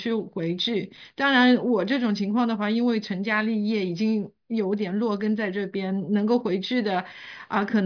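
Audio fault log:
No fault is heard in this speech clip.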